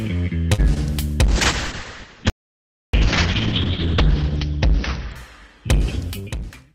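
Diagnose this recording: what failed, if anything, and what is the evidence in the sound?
Short stall from a late packet, 0.53 to 0.60 s, at the network and jitter-buffer stage. A packet arrived late, the buffer emptied, and the receiver held the last sound for 48 ms before resuming where it left off. Nothing is lost, but the sound drags briefly.

Short concealed packet loss, 0.74 to 0.78 s, also network. About 20 ms of audio never reached the decoder, and the receiver covered the gap by extending the preceding sound before blending back, leaving a brief smear or wobble.

Call bitrate drop, from 1.29 s to the end, a codec stage reacting to the network. The encoder fell from 64 kbps to 6 kbps, spending 2.36 s at the lowest rate, and audio bandwidth shrank from 20 kHz to 6 kHz. The sound turns coarse, watery and muffled.

Audio dropout to silence, 2.30 to 2.94 s, at the capture stage. About 0.64 s drops to silence with no room tone, and the sound cuts off and returns abruptly. 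The likely cause is a lost input device or link while silence kept being written.

Jitter buffer speed-up, 6.21 to 6.57 s, in receiver buffer processing. With excess audio queued, the receiver cut many short pitch-period slices, around 40 ms in all, so this stretch plays at 110% speed with unchanged pitch and sounds hurried.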